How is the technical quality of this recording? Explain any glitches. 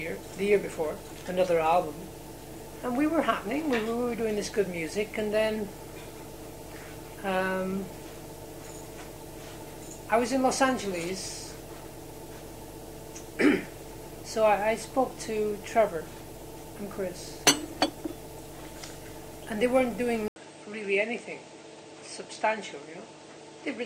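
The recording has one clear fault, near the end. At 20.28 s, after a gap of about 80 ms, the sound turns duller and quieter until the end, likely because the input switched to a poorer device. Nothing above 8.8 kHz gets through, the level drops by roughly 5 dB, and a new noise floor sits around 30 dB below the signal.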